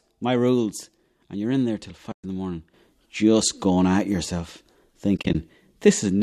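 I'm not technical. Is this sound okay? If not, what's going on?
No. AAC frame loss with muting at 2.12 to 2.24 s, between "you're in there till" and "in the morning just": chunks of the compressed audio went missing and the player filled them with silence, fading out and back in. AAC frame loss with muting again at 5.17 to 5.35 s, after "just going at yourself": several short gaps scattered across that stretch, the longest about 30 ms, each fading out and in.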